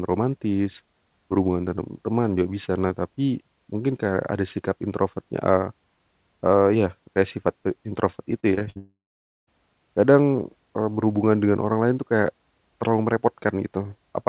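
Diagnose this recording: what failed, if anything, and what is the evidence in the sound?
Network stage, repeated packet loss (robotic sound). Right after "kayak sifat pe introvert", from 8.40 to 8.77 s, the speech turns choppy and robotic. Five short holes, the longest 55 ms, are patched by stretching the previous sound. About a third of that span is concealed.

Network stage again, a long network dropout, likely the cause here. From 8.77 to 9.49 s the audio stops. A brief fading continuation of the last sound gives way to about half a second of silence. The speech returns with that stretch missing, still band-limited below 4 kHz by the telephone-grade call codec.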